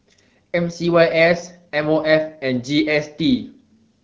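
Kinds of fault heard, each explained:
No faults heard; the speech shows only the light coding texture of the AMR wideband (HD Voice) codec, with its noise-filled top band above 6.4 kHz, which fits a 12.65 kbit/s mode.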